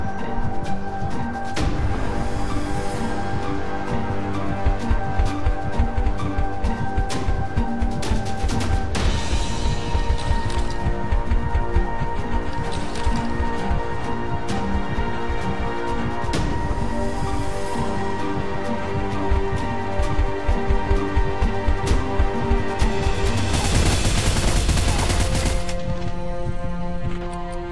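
No dropouts, distortion, level jumps or other technical faults turn up anywhere in the recording.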